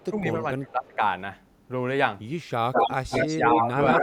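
Right at the start, from 0.0 to 0.05 s, there's a tiny echo leak: a very faint copy of the speech trailing by 253 ms. It's most likely a speakerphone's echo canceller letting a trace of the far end back through.

From 0.1 to 1.01 s the speech dips in pieces, by around 15 dB at the deepest, across most of that stretch. That's speech suppressed in double talk, likely because both sides were talking and the canceller ducked the talker along with the echo.

The echo leak returns much louder later, at 2.73 to 2.95 s, 3.11 to 3.6 s and 3.88 to 4.02 s. Each time there's a copy 200 ms behind the speech at roughly the same level, so it sounds like a clear doubling rather than a faint ghost. The cause is likely the same canceller failing outright.

Overlapping that, from 3.35 to 3.77 s, the speech gets ducked again in chunks for a few tenths of a second, dropping around 15 dB. That's another bout of suppression in double talk, likely triggered by the echo and the talker colliding.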